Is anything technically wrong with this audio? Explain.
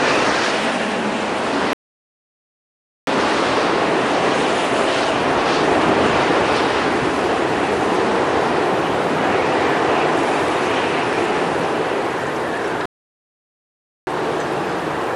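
Yes, there are two playback stalls. The first runs from 1.73 to 3.07 s, a 1.34 s dropout, and the second from 12.86 to 14.07 s, lasting 1.21 s. Each time the sound cuts out mid-flow into silence and then resumes. The likely cause is the player starving for data or having its audio thread blocked, so nothing reaches the output until it catches up.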